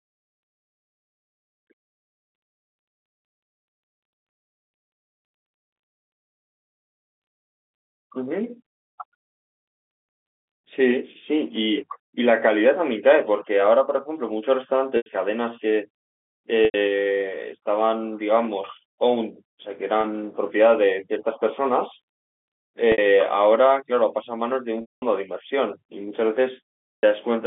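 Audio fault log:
14.97, 16.65, 20.01, 22.92, 24.81 and 26.95 s: packet loss with pitch repetition. Short buzzy held tones (about 90, 90, 30 and 60 ms), with the 210 and 270 ms gaps fading toward silence, as the receiver bridged each gap by repeating the last pitch period.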